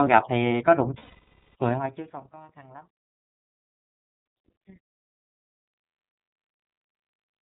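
Throughout, the iLBC codec limits the audio to narrowband. A spectrogram shows nothing above 4 kHz, and the sound is slightly rough and synthetic, consistent with its 30 ms frame mode.

From 0.99 to 1.55 s, and again from 4.03 to 4.18 s, lost iLBC frames are concealed by repeating the last pitch cycle. This produces a held, buzzy vowel with evenly repeating waveform periods and smeared, fading harmonics.

From 4.46 to 6.04 s, zipper noise rides on a level change of about 25 dB, applied as unsmoothed 2 dB steps roughly ten times a second. It ticks audibly, showing as a staircase envelope with thin vertical clicks.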